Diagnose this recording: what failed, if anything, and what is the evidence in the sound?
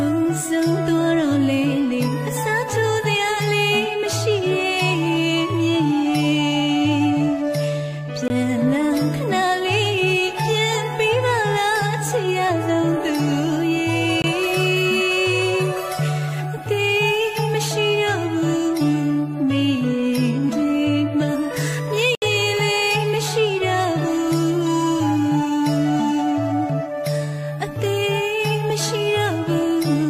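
What failed is the audio buffer: three blocks of digital silence where the output simply wasn't filled in time. You can hear it at 8.28 s and 14.22 s, each a 20 ms dropout, and again from 22.15 to 22.22 s, a longer gap of about 70 ms that reads as a small hole. The sound drops straight out and straight back with no ramp. That's the signature of a driver or buffer underrun.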